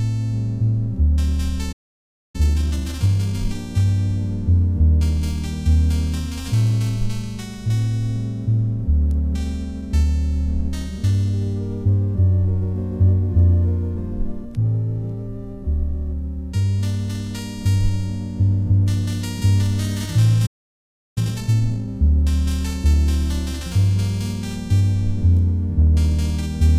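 At 1.72 s the sound cuts out for about 0.62 s, a playback stall, likely from the player running short of data. The waveform drops to a flat line and the spectrogram shows a clean vertical gap before the audio resumes at 2.36 s. From there until 3.58 s comes time-compressed catch-up at 1.5x. The player trims its backlog by splicing out short pieces and cross-fading the joins, so the audio rushes ahead at unchanged pitch. Spectrogram harmonics keep their height but crowd together in time.

The pattern repeats. At 20.46 s a second stall silences the output for about 0.70 s, again a blank band on both views, likely for the same cause. It is followed from 21.18 to 21.88 s by 2x catch-up, noticeably more hurried than the first.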